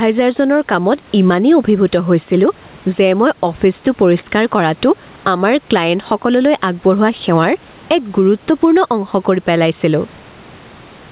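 From the first second to the last, the speech has gain pumping. The gain swings by around 10 dB, pulled down the moment the talker gets loud, so the level keeps breathing with the speech. Loud and quiet parts sit squashed close together. The likely cause is input gain set far too high, with a fast limiter or compressor clamping down on every peak. The room noise sits about 36 dB under the speech, and nothing above 4 kHz gets through, which fits a G.711 A-law call at 64 kbps.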